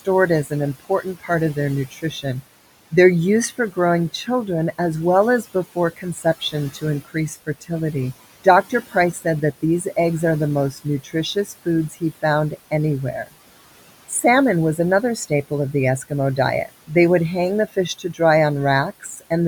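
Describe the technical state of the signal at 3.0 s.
At 3.0 s, noise suppressor artifacts are present, as they are across the whole clip. The suppressor treats steady background as noise and pulls it down by about 17 dB, frame by frame. The room noise, about 18 dB below the speech, sinks in the gaps and rises again under the talking.

The same moment falls inside a stretch of speech cut by the noise suppressor, running from 0.00 to 19.31 s. Here the suppressor mistakes parts of the speech for noise. Soft consonants and word endings get turned down along with the background, by up to about 18 dB at the deepest. Across the span this adds up to roughly two seconds of affected sound. Those parts sound swallowed or faint.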